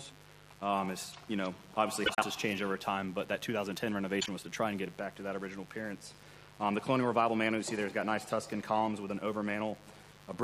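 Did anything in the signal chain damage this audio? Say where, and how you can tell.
Yes. Mains buzz entered in the analogue wiring: a poorly shielded or rectifier-fed 50 Hz supply injects sharp switching spikes twice per cycle. Throughout the audio this gives a steady, raspy buzz, with harmonics climbing into the kilohertz range, sitting about 25 dB below the signal.

Frames out of order point to the network or decoder input: adjacent blocks arrived swapped and were decoded as received. From 2.06 to 2.24 s two 78.4 ms halves trade places, and from 4.20 to 4.29 s two 26.1 ms halves do, consistent with single codec frames exchanged. Each stretch sounds like a garbled flutter, with no lost time.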